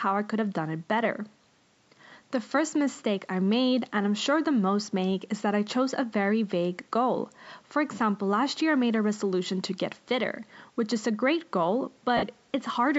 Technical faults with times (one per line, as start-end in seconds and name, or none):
12.17-12.23 lost LE Audio frames